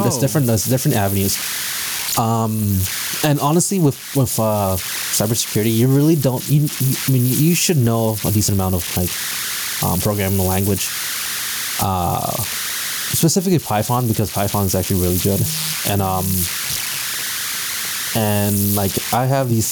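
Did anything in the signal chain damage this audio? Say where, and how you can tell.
Yes, two things, both running the whole way through. At the converter stage you get converter idle tones: a whistle around 1.5 kHz in the pauses and grit under quiet speech, about 13 dB below the signal. That's an undithered delta-sigma modulator settling into repeating bit patterns on small inputs.

Then there's gain pumping. The gain swings by around 10 dB, so loud and soft speech sit squashed together. The likely cause is mic gain set way too high, with a fast limiter or compressor clamping down on each peak. The room noise itself sits about 36 dB under the speech.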